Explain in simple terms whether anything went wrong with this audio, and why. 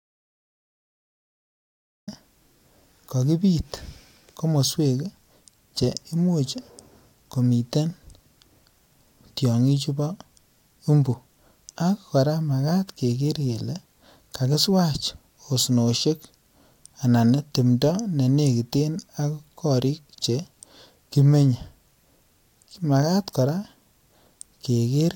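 The recording opens with an audio dropout to silence, running from the very start to about 2.08 s. Unlike a natural pause, which keeps faint background noise, this gap is totally dead, likely because the input was briefly lost while recording continued. Any speech there is gone.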